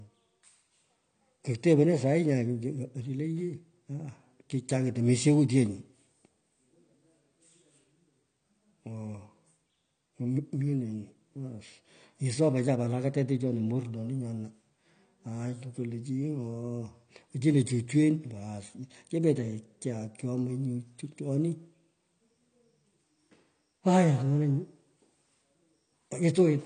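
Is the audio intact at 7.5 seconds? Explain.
No. At 7.5 seconds, as throughout, the speech sounds dull and smeared, with nothing above 9 kHz. This is likely AAC compression at a low bitrate, around 32 kbps.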